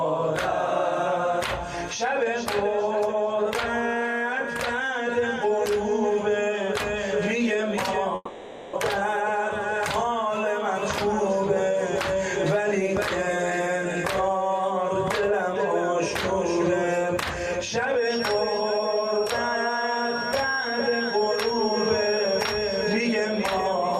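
At 8.15 s the sound freezes into a buzzy smear that fades, leaving a moment of near silence before things pick up again at 8.75 s, with roughly 0.6 s simply gone. That's a long network dropout, likely lost packets the receiver papered over.

From 17.93 s to the end, a thin, steady 5.6 kHz whistle sits behind everything, around 10 dB under the main sound and swelling and fading slowly in level. It's a feedback whistle, likely a speaker-to-mic loop hovering right at the edge of howling.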